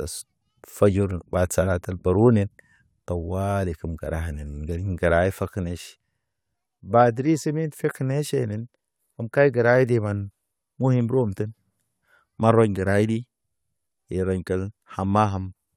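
Periodic USB or driver dropouts run from 0.25 s to 15.51 s: something blocks the USB bus or audio driver every 0.25 s, and each time a sliver of speech, only a small fraction of a millisecond, is skipped outright rather than filled with silence. The abrupt jump in the waveform produces a regular, evenly spaced tick, roughly seventy in all, audible while speech is present and vanishing in the pauses.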